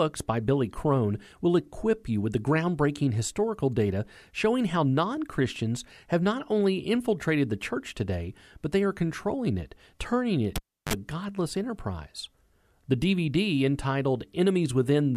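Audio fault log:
10.56–10.93 s, cable pulled and plugged in: after "controlling it turning it" a pop marks the live cable breaking contact, leaving near silence for 326 ms. A 41 ms burst of 50 Hz mains buzz comes as the tip touches first, then a second pop before "a godless enterprise".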